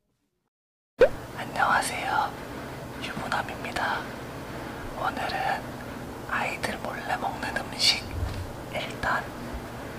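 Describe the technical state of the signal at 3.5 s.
At 3.5 s the signal is intact, with no dropout, distortion, glitch or other fault present at that point.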